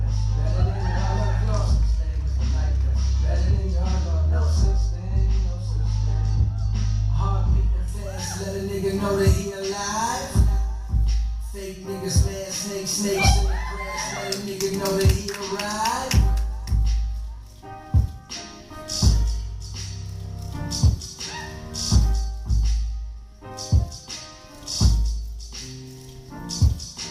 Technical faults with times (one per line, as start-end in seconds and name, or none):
7.88-27.10 pre-emphasis left on